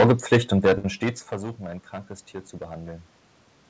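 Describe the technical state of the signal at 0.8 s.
At 0.8 s the speech hits a short stall from a late packet, running from 0.78 to 0.86 s just before "stets versuchen ein krankes". A packet arrived late and the jitter buffer ran dry, so the receiver held the last sound for about 60 ms, then resumed exactly where it stopped. Unlike a lost packet, nothing is skipped. The sound is only briefly drawn out, with a slight buzz or dip.

Hard clipping is also present at this moment, as it is across the whole clip. The signal is driven about 15 dB past what the stage can pass, so a small share of the peaks are sheared flat. That adds a harsh, fuzzy edge on the louder syllables. Unlike coding noise, it follows the level and bites only on the peaks.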